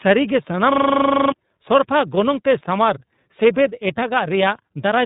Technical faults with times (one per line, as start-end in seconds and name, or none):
0.00-5.06 tandem speech coding
0.72-1.32 system hang loop